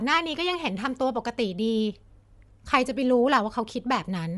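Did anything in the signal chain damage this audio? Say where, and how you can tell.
Yes. The damage sits at the codec stage and runs through the whole speech clip. The top end has that grainy, breathy sheen you get when a transform codec drops upper bands and fills them with noise. That points to likely Bluetooth LC3 compression, fitting roughly 48 kbps with 7.5 ms frames.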